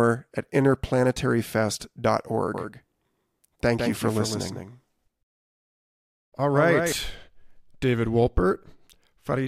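From 2.54 to 6.92 s the speech doubles, with a second dry copy about 5 dB quieter trailing roughly 150 ms behind: a doubled audio track, likely from a slower second capture path.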